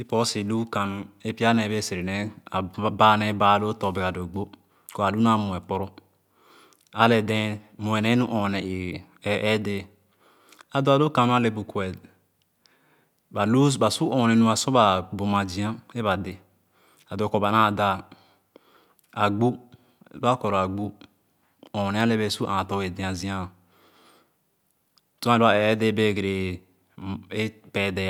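Nothing in this recording stands out as a technical fault at any point, so there's no list of problems to walk through here.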